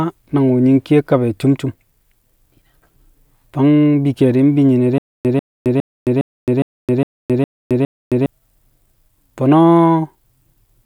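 From 4.98 to 8.26 s the speech breaks into a stutter with silent gaps: a 143 ms fragment repeats eight times, each followed by 267 ms of dead digital silence, every 410 ms. The likely cause is a stalled stream replaying its last fragment. The silent gaps and the even pace set it apart from random dropouts.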